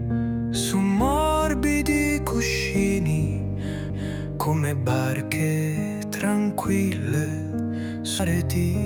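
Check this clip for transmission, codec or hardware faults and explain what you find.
Two CD skips can be heard, at 3.90 s and 8.19 s. Each one is a small tick with a very short dropout, a couple of milliseconds at the first and a few at the second. The sound then carries on from a different point instead of where it broke off. The laser was knocked, or thrown by a flaw in the disc, onto another turn of the spiral track. The player muted briefly and resumed from that new position.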